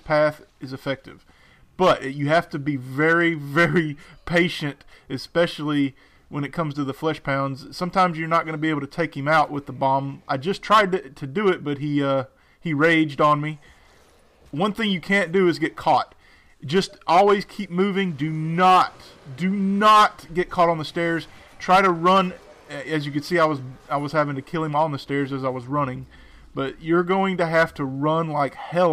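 Nothing technical stands out here; the sound runs along steadily with no dropouts, glitches or other faults to flag.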